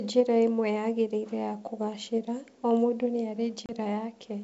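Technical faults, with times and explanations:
3.66–3.71 s, packet loss on an ADPCM call: right after "kũgaacĩra o mũndũ nĩ" a hard-edged 30 ms hole replaces a few lost packets. Unlike a plain dropout, the G.722 decoder's predictor and step size lose sync, so the speech returns slightly distorted before settling.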